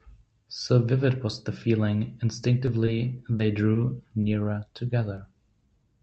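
Short concealed packet loss first appears at 2.65 to 2.69 s. About 20 ms of the speech never reached the decoder in time, so the receiver filled the gap by extending the preceding sound: pitch-continued if voiced, shaped noise if not. It then faded back into the real signal. The result is a brief smear or wobble, and whatever fell in that 20 ms is simply gone.

A short stall from a late packet follows at 2.85 to 2.89 s. Here the jitter buffer ran dry because a packet arrived late rather than being lost. The receiver stretched the current sound by about 20 ms, then resumed exactly where it left off. Nothing is missing, but the sound lingers slightly too long with a faint buzz or dip, and everything after it plays about 20 ms later.

Short concealed packet loss then returns four more times, at 3.37 to 3.41 s, 3.73 to 3.77 s, 4.21 to 4.25 s and 5.15 to 5.19 s. Each time, about 20 ms is replaced by continued sound and blended back in, heard as a quick smear or wobble where the original detail has dropped out. 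Throughout the clip the call codec, Opus, limits the audio to about 8 kHz, which fits a bitrate around 40 kbps.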